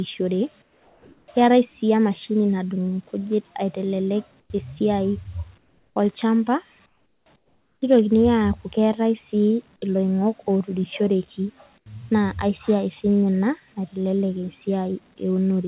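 The sender's voice detector likely stopped transmission in the pauses, with the receiver filling them with comfort noise in place of the background. The real background, sitting roughly 35 to 39 dB below the loudest speech, gives way to a flat, featureless hiss at 0.62–1.28 s (about 4 dB quieter), 4.4–4.5 s (about 12 dB quieter), 5.58–5.96 s just after "aitelelek esiai" (about 7 dB quieter), 6.86–7.26 s (about 12 dB quieter) and 7.36–7.82 s (about 11 dB quieter). The last is at 11.78–11.86 s between "keetae si iloing'ok oturushereki" and "naa aisiai sinye" (about 14 dB quieter). Each time the ambience drops and goes smooth until speech resumes.

At 4.48 s there is an onset clipped by the voice detector, likely because it reacted late as sound returned. About 20 ms of the start went unsent and was covered by the tail of the synthetic noise, so the sound begins abruptly with no soft lead-in. 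Throughout, the call path cuts everything above 4 kHz, which fits G.711 A-law at 64 kbps.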